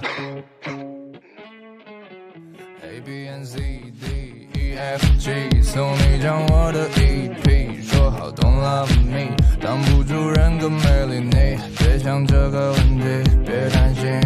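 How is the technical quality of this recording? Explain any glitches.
There's one glitch worth flagging, right near the start. From 0.82 to 1.3 s you get zipper noise: the level drops by roughly 10 dB, but instead of gliding down it's applied in coarse steps, around fifty a second, with no smoothing between them. Each jump puts a tiny click into the waveform, so you hear a fast ticking or zipping riding on the sound for that half-second while the level falls.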